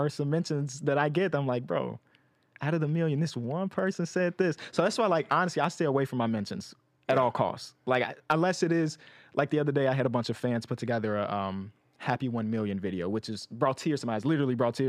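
Nothing in the recording stood out as a technical problem on listening.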